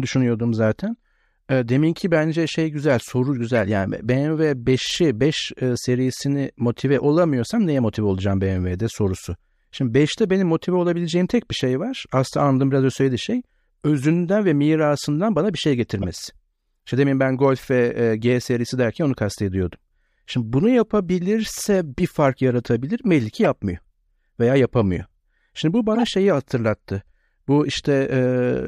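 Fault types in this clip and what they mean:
Corrupt frame decoded: Damaged compressed frames were played as if valid, so energy landed at wrong frequencies. Six chirps or noise bursts break into the speech, near 3.55, 4.77, 16.02, 22.36, 23.44 and 25.95 s. Most are loud; the one at 22.36 s is faint.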